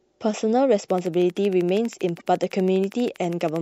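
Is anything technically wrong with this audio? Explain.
Yes, there are two faults. From 0.90 to 3.57 s runs a train of clicks. A regular pulse arrives 12.5 times per second, likely interference. About forty ticks, peaking roughly 5 dB above the speech. Between 2.17 and 2.21 s there is damaged data in the compressed stream. The decoder loses frame sync and resynchronises. A brief glitch results.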